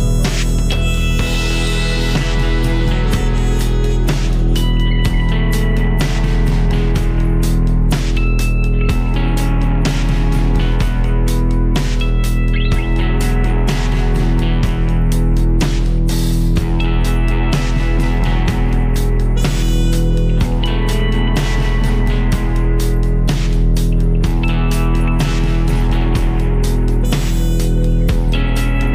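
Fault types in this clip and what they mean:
No technical faults can be heard anywhere in the audio.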